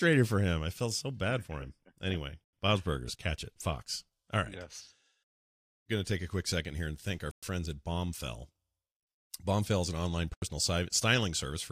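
At 7.31 s the speech drops to silence for 112 ms. At 10.34 s it cuts out again for 80 ms. Both gaps fit a Bluetooth stall. Interference likely delayed packets. The headphone buffer ran empty, and playback paused until they arrived.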